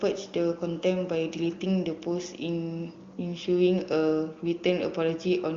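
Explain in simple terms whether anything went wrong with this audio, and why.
Nothing went wrong here; no faults can be heard.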